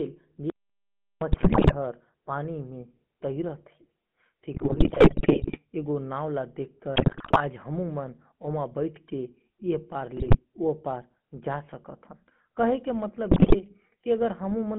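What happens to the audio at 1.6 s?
At 1.6 s the speech breaks into squawks, pops and gargling. This is GSM bit errors, running from about 1.32 to 1.75 s. Across that 0.43 s stretch, flipped bits reached the speech decoder and corrupted the filter, pitch and gain values it rebuilds each frame from. Frames come out with a bent spectrum or a sudden jump in level. The density of the garbling points to a heavily damaged link, with most of the roughly twenty 20 ms frames in the span corrupted.

Underneath the burst, as everywhere in the clip, is the buzzy, gravelly roughness of the GSM full-rate codec. The coder models the vocal tract and drives it with a sparse, regularly spaced pulse excitation, and the result fits the 13 kbps full-rate scheme. The damage is plainly audible. The band is also squeezed to roughly 150 Hz to 3.4 kHz, so nothing above that survives.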